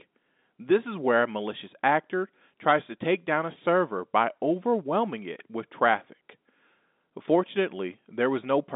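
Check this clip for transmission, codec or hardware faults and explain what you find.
Nothing here points to a transmission, codec or hardware problem; the speech comes across as ordinary G.711 mu-law telephone audio at 64 kbps, with the usual line band of about 200 Hz to 3.7 kHz and nothing above 3.8 kHz.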